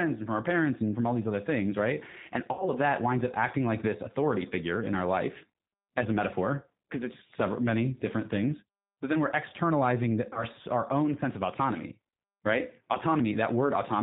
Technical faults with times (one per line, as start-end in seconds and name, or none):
0.00-14.02 G.729 codec
2.53-2.69 VoIP packet loss concealed by the speech codec
5.52 VoIP packet loss concealed by the speech codec
10.33-10.44 VoIP packet loss concealed by the speech codec